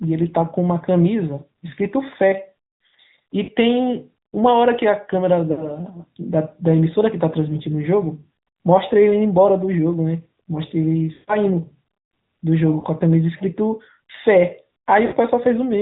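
Throughout the clip the speech carries the AMR narrowband mobile codec's signature. Nothing above 4 kHz survives, and a buzzy, synthetic edge sits on the voice. That edge separates it from a simple low-pass filter, and its plainly audible strength points to a mid-rate mode around 10 kbps.

Lost AMR speech frames break in at 3.44–3.51 s, 5.52–5.71 s, 11.14–11.36 s, 12.80–12.87 s and 15.06–15.14 s. The longest is at 11.1 s, where roughly 0.14 s of sound was lost. In each gap the decoder keeps reusing the last good pitch and vocal-tract settings while the gain falls, so the sound smears, warbles and fades rather than cutting to hard silence or clicking. Speech then returns weak or rough.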